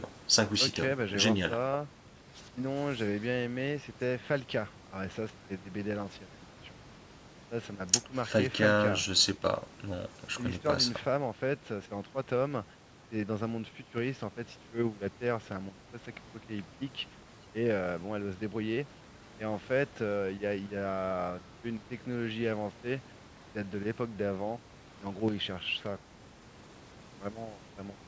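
No technical faults are audible.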